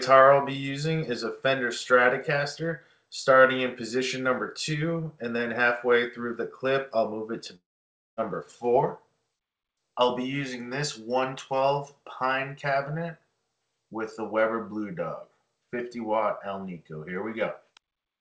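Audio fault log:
7.56–8.19 s, long network dropout: the last sound is stretched into a fading buzz, then near-silence holds for about 0.56 s before playback resumes, with about 0.6 s of audio lost, likely because packets stopped arriving and the receiver concealed the gap.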